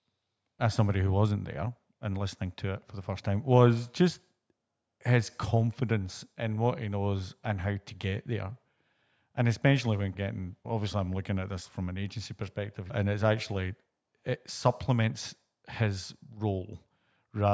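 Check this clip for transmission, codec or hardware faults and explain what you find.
Nothing stood out on listening to this speech, which carries the usual trimmed low bass and 8 kHz upper limit of call microphone processing.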